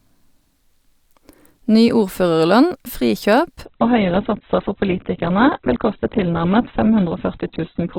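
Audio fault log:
3.65–7.99 s, adaptive stream at a lower bitrate: right after "ordførerlønn frikjøp" the speech abruptly goes dull and smeary, nothing above 4.1 kHz, which fits a drop to a very low-bitrate Opus stream.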